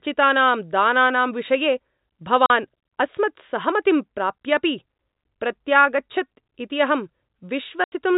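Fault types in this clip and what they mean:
Packet loss filled with silence: the network dropped audio packets, and the receiver played digital silence in their place instead of concealing the gap. The speech is cut by two clean holes: 40 ms at 2.46 s, just before "अस्मत्सहमतिं प्राप्यापि", and 80 ms at 7.84 s. Both lengths are whole multiples that fit 20 ms packets. Each hole starts and stops abruptly against the narrow telephone-band sound.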